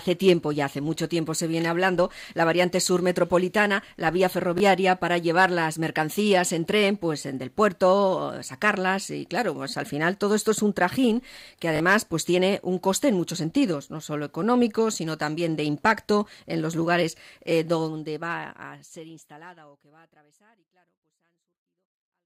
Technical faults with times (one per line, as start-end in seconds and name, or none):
4.58 repeated buffer
11.76-11.80 repeated buffer